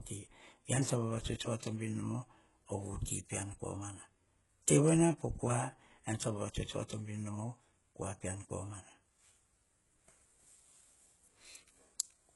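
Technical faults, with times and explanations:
Throughout: HE-AAC compression. The treble sounds synthetic, with gritty, metallic s sounds and heavy codec damage, and nothing above 11.5 kHz. This likely comes from spectral band replication copying lower bands upward at a very low bitrate, about 12 kbps.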